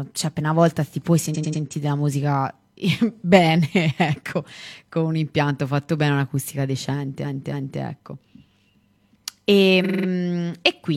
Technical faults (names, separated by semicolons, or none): repeated frames